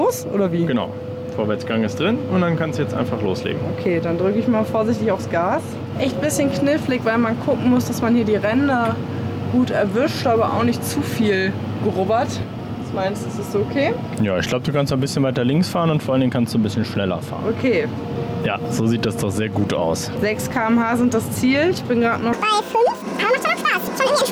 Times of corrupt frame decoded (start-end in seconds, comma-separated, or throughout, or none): none